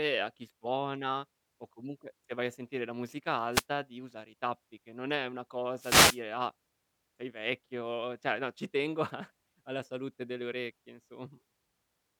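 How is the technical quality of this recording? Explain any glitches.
The recording is speech with two brief wireless microphone noise hits. The first runs from 3.51 to 3.64 s, the second from 5.78 to 6.21 s. Each happens when the analogue FM radio link fades as reflected signals cancel the direct one, so the receiver's own noise rises into the audio. Each is heard as a short swish or burst of static; the second is the longer.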